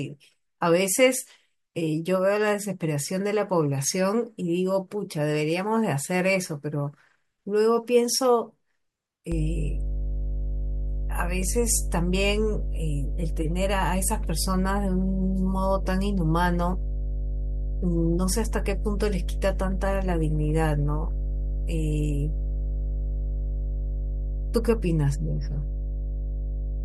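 At 9.32 s a mains hum comes in and sits there right to the end of the clip at 26.84 s. It's a steady low drone at 50 Hz with a few low harmonics on top, and it's roughly as loud as the speech itself, so it's hard to ignore. That's the power line leaking into the signal, the kind of thing a ground loop or a transformer sitting close to the cabling will do.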